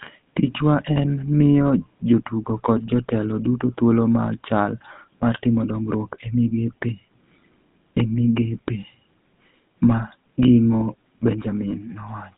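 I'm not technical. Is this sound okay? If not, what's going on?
No. The whole clip has the sound of the GSM full-rate codec, the system used by early digital mobile phones. It rebuilds the speech from a simple model of the throat and mouth, driven by a stream of regular pulses. That makes the speech buzzy and gravelly from start to finish. It also strips the top end. Almost nothing above 3.8 kHz survives. The usable range runs from about 150 Hz to 3.6 kHz, so speech sounds thin and muffled, like an old phone call.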